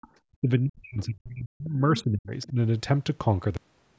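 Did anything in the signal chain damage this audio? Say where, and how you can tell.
Yes. Speech suppressed in double talk appears at 0.00–0.04 s and again across 0.41–2.57 s, where the talker's level dips by as much as about 40 dB, adding up to roughly a second and a half of ducked or broken speech. The stage is call processing: the echo canceller most likely could not tell the near talker from loudspeaker echo while both sides spoke, so its suppressor pulled everything down together.

The other side's voice leaking through shows up in three short scraps, at 0.02–0.08 s, 1.97–2.03 s and 2.42–2.46 s. They are faint at the first and last, around 30 to 35 dB under the speech, and much more prominent at 1.97 s, only about 15 dB down. This is likely residual echo: the far end's audio, played on the device's loudspeaker, re-entered the microphone, and the canceller left pieces of it behind.

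The cut-off end comes at 3.57 s. The speech stops mid-sound and falls straight into digital silence for the remaining fraction of a second, with no natural decay. That points to the driver or buffer stage, where the final buffers were never written out or played. The call path's band limit, with nothing above 8 kHz, is normal and not part of this damage.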